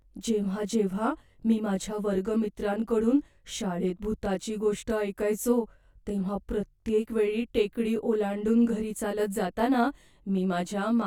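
Throughout, channel delay (comb filtering): one side lags about 20 ms, so the mono sum sounds rough or slightly doubled, and the spectrogram shows evenly spaced notch stripes.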